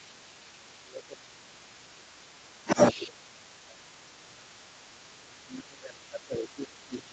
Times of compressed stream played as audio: none

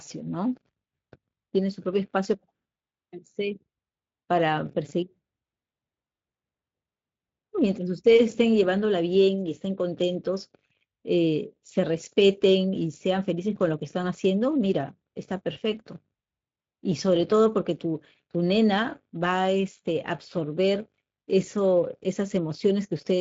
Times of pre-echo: none

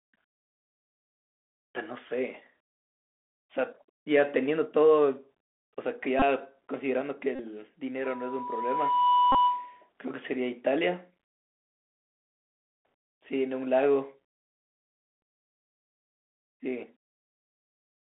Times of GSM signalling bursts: none

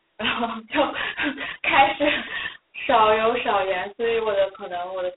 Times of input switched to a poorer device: none

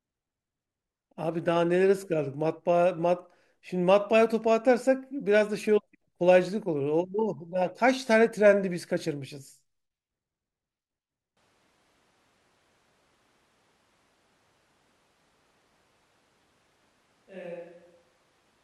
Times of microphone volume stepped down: none

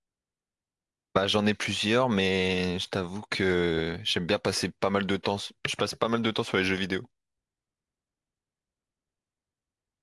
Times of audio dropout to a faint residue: none

